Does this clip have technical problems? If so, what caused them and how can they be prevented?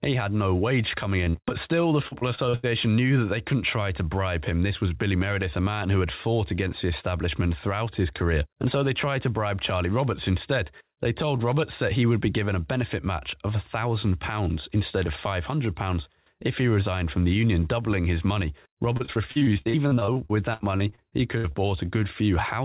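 Yes: repeated packet loss (robotic sound) at 1.24–1.52 s, 2.08–2.65 s and 18.97–21.56 s. Packets kept dropping, and each gap of up to about 80 ms was patched by repeating the previous sound, which makes the speech choppy and robotic. To prevent this, use a steadier network path or a deeper jitter buffer with forward error correction. The G.711 call path leaves nothing above 4 kHz.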